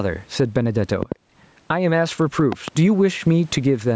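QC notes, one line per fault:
Throughout, gain pumping: the level breathes by around 10 dB, likely from gain set too hot into a fast limiter.
1.03–1.14 s and 2.52–2.70 s, loud pop: a quick double pop each time, roughly 15 dB then 10 dB over the speech, which carries on underneath; likely a voltage spike from a plug or switch.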